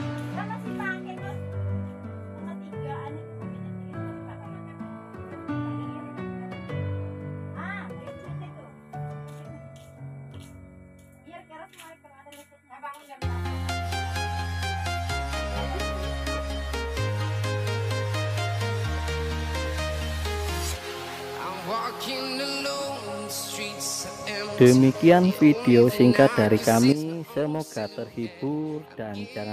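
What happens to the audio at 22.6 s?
Nothing goes wrong at 22.6 s; the audio plays through that moment intact, with no dropout, click or other fault.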